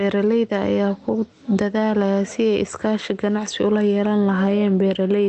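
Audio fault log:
throughout, gain pumping: the level is pulled down as each louder syllable arrives and released in the gaps. The swing is around 15 dB. Quiet and loud passages sit close together in level, and the delivery sounds squashed and breathing. The likely cause is input gain set far too high, with a fast limiter or compressor clamping down on each peak and releasing in the gaps.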